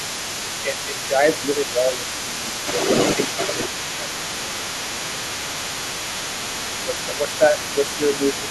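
Throughout the clip, the other side's voice is leaking through about 10 dB below the talker. This is likely residual loudspeaker echo, and the spectrogram shows a fainter, overlapping second harmonic pattern.

Speech suppressed in double talk follows. The talker drops by up to about 10 dB at 0.41–2.05, 2.22–2.76 and 3.57–5.2 s, then by about 5 dB at 5.45–5.78, 6.85–7.55 and 7.73–8.49 s. The likely cause is the canceller ducking both sides at once. The waveform envelope sags visibly in these stretches.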